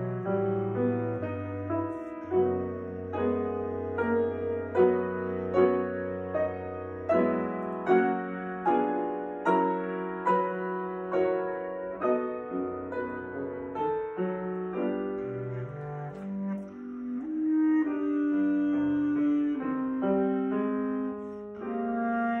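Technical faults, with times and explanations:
Nothing technical stands out here; the audio runs along without any problems worth flagging.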